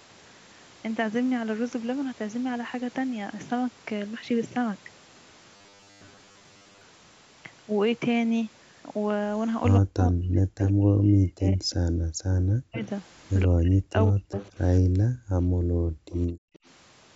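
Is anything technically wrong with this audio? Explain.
Yes, there are four kinds of fault.

From 5.56 to 6.81 s there is robotic sound from repeated short buffers: a rigid, metallic 100 Hz buzz. The likely cause is audio arriving too seldom, so roughly half the sound is replaced by repeats of 10 ms chunks.

Between 9.8 and 14.38 s the speech is suppressed in double talk, dipping in pieces for about three seconds in total and by up to about 40 dB. This is likely an echo canceller turning down both sides while both talk at once.

An echo leak adds a delayed copy of the voice 178 ms behind the original at 10.63–10.71, 12.77–12.88, 14.35–14.51 and 16.1–16.59 s. It sits roughly 10 to 20 dB below the speech, likely loudspeaker sound the canceller failed to remove.

The background is gated by the echo canceller at 12.05–12.15 s and 14.81–16.53 s. The room sound drops by about 40 dB while the microphone is held down, then returns.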